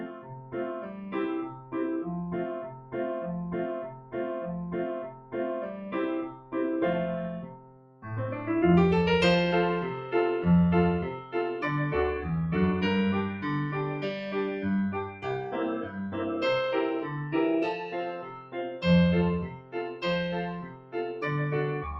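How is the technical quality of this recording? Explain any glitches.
The technical quality is compromised throughout by a speech-oriented noise suppressor acting on material it wasn't designed for, which leaves the level unstable and clips away sustained sound.

Noise suppressor applied to music or sounds: across the whole recording, a processor built for speech treats steady tones, ambience and decays as noise, so the gain swings by roughly 15 dB. The result pumps and thins. A waveform shows a breathing envelope, and a spectrogram shows sustained bands fading in and out.

Sound cut by the noise suppressor: held or fading sound is pushed down harder at 0.0–2.95 s, 3.87–5.35 s, 6.29–8.06 s, 11.17–11.35 s, 15.05–16.17 s and 17.81–21.22 s. The dips reach about 10 to 14 dB, deepest in the 6.29–8.06 s and 17.81–21.22 s stretches. Tails vanish early, appearing as sudden gaps after transients on the waveform.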